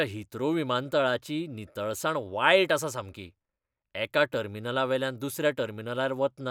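A short speech recording with no technical faults to report. Nothing in it calls for a time or a cause.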